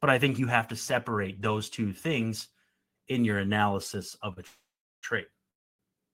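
At 4.33 s, just after "in your analysis of", a short stall from a late packet holds the last sound about 33 ms too long with a faint buzz or dip. A packet arrived after it was due, so the receiver stretched what it had, then resumed without losing anything.

A call audio freeze follows at 4.47 to 5.05 s, after "your analysis of a". The sound trails into a fading buzz or hiss and then goes silent for about 360 ms, inserting 560 ms in total. A second freeze at 5.51 to 5.81 s is almost entirely silent for about 280 ms. The likely cause is packets held up in transit until the jitter buffer emptied. Unlike the brief stall, each freeze fades to silence and leaves a gap, though the audio picks up where it stopped with nothing missing.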